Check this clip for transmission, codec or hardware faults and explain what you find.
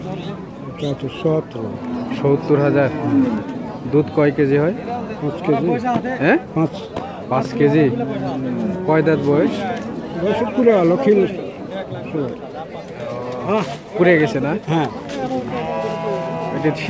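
Nothing here points to a transmission, codec or hardware problem; the sound simply tops out around 8 kHz, which fits an ordinary wideband call path such as G.722 at 64 kbps.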